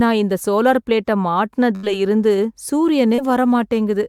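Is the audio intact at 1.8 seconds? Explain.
No. Right after "நான் இந்த சோலார் பிளேட்டை" the speech freezes into a held, fading continuation of the last sound from 1.75 to 1.86 s, then jumps ahead. This is a burst of packet loss: a run of packets was lost or arrived too late, so the receiver stretched the final sound it had, about 74 ms of synthetic fill, while lowering its level. About 80 ms of the real speech is gone when playback resumes.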